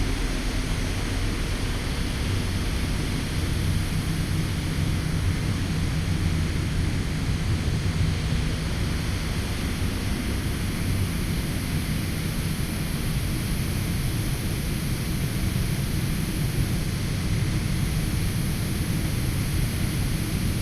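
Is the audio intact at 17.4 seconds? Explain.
Yes, at 17.4 seconds the audio is intact, with no dropout, click, distortion or other fault.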